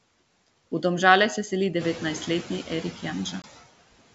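Noise suppressor artifacts run through the whole clip. The suppressor pulls steady noise down by about 20 dB, frame by frame. The background dips between phrases and swells under the speech.

From 1.79 to 2.35 s, just after "se seli", the noise suppressor is catching up. The room noise jumps by about 11 dB around 2.0 s. The suppressor's noise estimate lags, so the louder noise leaks through, cut by only about 6 dB. It then sinks as the estimate adapts over 560 ms.

At 3.42 s there is packet loss on an ADPCM call, heard over the G.722 wideband link. About 20 ms drops out as a hard-edged hole of silence, which fits a single lost packet. The decoder's predictor and step size no longer match the sender's. The speech comes back with brief, slight distortion, then settles.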